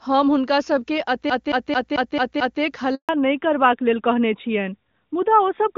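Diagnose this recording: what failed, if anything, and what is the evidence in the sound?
The playback stage failed first, with the CD stuck on one turn. From 1.30 to 2.62 s, a 0.22 s slice of speech repeats six times. A short mute falls at each jump. A scratch keeps throwing the laser back one track, giving this fast, even stutter.

A handover gap in the network follows. At 2.95 s the speech dies away quickly and stays silent for 140 ms, until 3.09 s. No speech frames arrived while the call switched networks, so whatever was said then is lost.

The codec then falls back to narrowband. From 3.09 s to the end, nothing remains above 4 kHz. Before that, the HD Voice wideband path sounds clean. Afterwards the speech is duller and rougher, which fits a drop from AMR-WB to the older AMR-NB codec at about 12.2 kbit/s.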